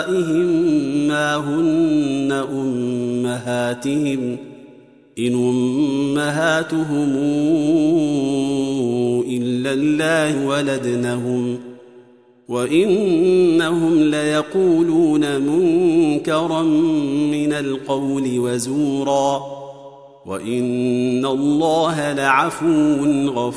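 Nothing here catches the ear as a technical fault; it's just the recording, with nothing jumping out along the way.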